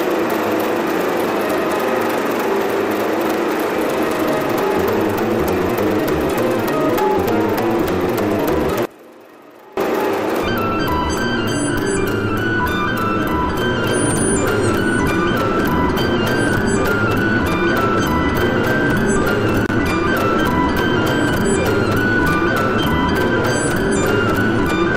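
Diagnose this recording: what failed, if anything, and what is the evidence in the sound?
A loose connector crackle points to a worn or dirty contact in the analogue wiring that makes and breaks as it shifts. The signal is chopped in irregular scratchy bursts from 4.09 to 4.21 s and from 19.66 to 19.74 s.

Between 8.85 and 9.77 s the level falls by about 23 dB and the sound drops to a faint residue. This is likely one channel inverted somewhere in the wiring or playback path, so the shared content cancels when the channels are summed to mono.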